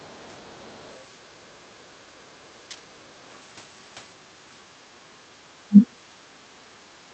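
This speech clip carries brief scraps of a second voice at 0.66 to 0.70 s, very faint, and again at 5.83 to 5.87 s, roughly 20 dB below the talker. That is the other side's voice leaking through, most likely loudspeaker echo the canceller failed to fully remove. The room tone dips by about 9 dB at 2.69 to 2.83 s, about 11 dB at 6.05 to 6.19 s and about 10 dB at 6.92 to 7.03 s, each time recovering within a fraction of a second. This is background gated by the echo canceller, which pulled the microphone down while the far end was playing. At 5.68 to 5.77 s the talker's own voice drops out sharply, by around 35 dB for about a tenth of a second. That is likely speech suppressed in double talk, with the canceller treating overlapping near-end speech as echo. The call-codec path limits the audio to about 8 kHz, consistent with Opus at around 40 kbps.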